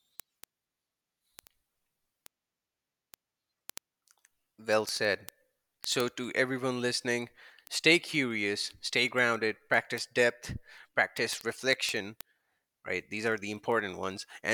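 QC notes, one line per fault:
0.12–14.51 s, word clock ticks: the receiving device is running on its own clock rather than locking to the sender's digital link. The two clocks drift apart at a rate that points to a mismatch of roughly 300 ppm, so about every 70 ms a single sample is dropped or repeated and its neighbours are misread. Across the speech this produces around two hundred sharp ticks at a steady rhythm, uneven in strength.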